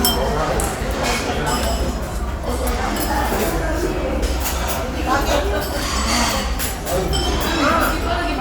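No technical faults can be heard anywhere in this audio.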